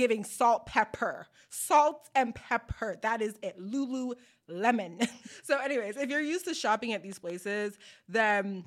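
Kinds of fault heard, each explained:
Train of clicks: near the end of the speech, from about 7.12 to 8.32 s, a short run of roughly three sharp, similar clicks cuts through, unevenly spaced at an average of about 1.7 per second and peaking around 5 dB above the surrounding signal. The clicks sit on top of the audio rather than replacing it. A repeating impulse of this kind likely comes from electrical interference from nearby equipment or a faulty connection or power supply.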